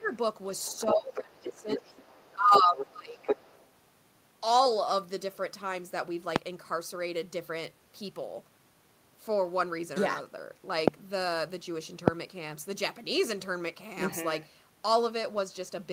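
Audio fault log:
0.00–0.13 s, 0.71–2.02 s, 2.35–3.27 s: speech suppressed in double talk. The voice dips by as much as roughly 20 dB while far-side sound is present, likely because the echo canceller could not separate talker from loudspeaker echo and attenuated both. Waveform envelope pinches inward; spectrogram energy thins in those spans.
0.04–0.08 s, 0.57–1.18 s, 1.54–3.70 s: other side's voice leaking through. A second voice sits under the talker, about 35, 20 and 5 dB below the speech respectively, likely residual loudspeaker echo the canceller left in the microphone signal. Spectrogram shows a fainter, separate harmonic pattern overlapping.
6.36–6.38 s, 10.88–10.90 s, 12.08–12.10 s: loud pop. Each is a single pop about 25 dB above the surrounding signal, likely a voltage step or pulse from a plug, switch, static or driver glitch, with speech continuing beneath. Waveform shows a tall spike; spectrogram shows a thin vertical broadband stripe.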